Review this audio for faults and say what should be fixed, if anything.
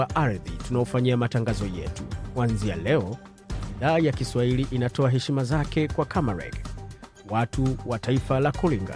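Nothing in this audio needs fixing, since there are no faults to review.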